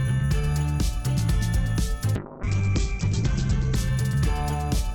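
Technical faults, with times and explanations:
2.16 to 3.83 s, call bitrate drop: the encoder got squeezed hard, and the top end gets chopped off around 8 kHz for about 1.6 s. It sounds coarse, which fits a fall from roughly 128 kbps to near 9 kbps.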